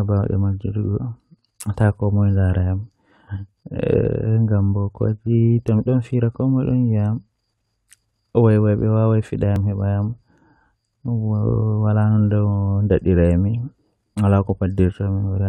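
At 9.56 s, overlapping stream segments make the player discard 6 ms of speech: a waveform jump and a thin vertical spectrogram line.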